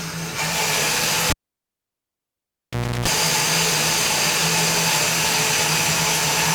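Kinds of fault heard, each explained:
Cable pulled and plugged in: a live connection is broken and then remade, so the signal path is cut for about 1.73 s while the cable is out. The sound drops with a pop at 1.3 s and falls to near silence. As the plug goes back in, only its tip touches at first, letting in roughly a third of a second of 60 Hz mains buzz before a second pop as the sounds return, around 3.08 s.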